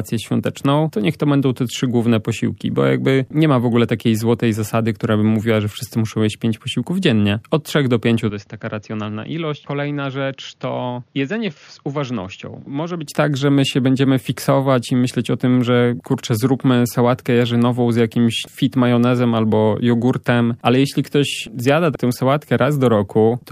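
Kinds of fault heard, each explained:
Input switched to a poorer device: 8.30–13.07 s, likely a narrower-band input taking over, so the sound dulls, drops about 10 dB and has nothing above 6.9 kHz.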